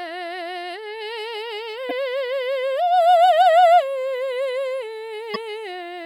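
At 1.87 s and again at 5.32 s, the music is interrupted by a short glitch lasting about 44 ms. This is damaged data in a compressed stream. Corrupted bytes cause the decoder to misread those frames, lose sync and search for the next valid frame header.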